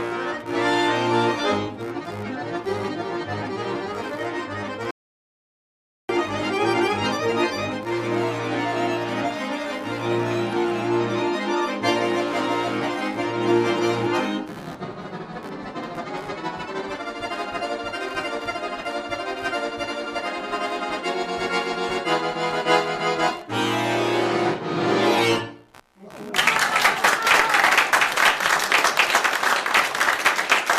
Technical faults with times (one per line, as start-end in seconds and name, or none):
0.00-30.79 computer activity noise
4.91-6.09 audio dropout to silence